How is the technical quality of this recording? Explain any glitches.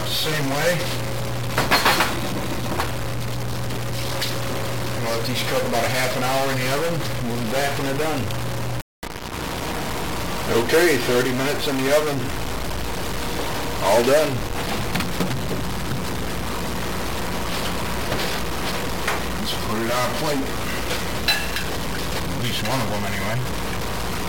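The quality is poor throughout, with one fault present from start to finish. A stuck bit runs the whole length of the recording. It is heard as harsh, buzzy distortion laid over the sound. Quiet gaps do not fall silent; they fill with a gritty noise. One data bit is likely held fixed at 0 or 1, perhaps by a broken line or converter. About half the sample values are then wrong by that bit's weight, which is a fairly high one, with errors around -20 dBFS. Because the wrong values follow the waveform, the distortion tracks the signal. Small values near zero keep crossing sign, which flips the bit pattern, so even pauses carry loud noise.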